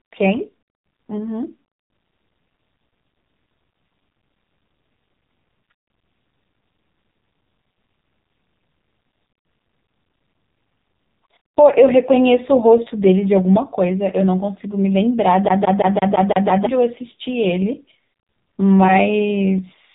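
From start to end, the speech carries AMR narrowband mobile codec damage. Nothing above about 3.8 kHz survives, and the heavy buzzy, synthetic texture from the coarse vocal-tract model and sparse pulse excitation fits a low mode of about 5.9 kbps.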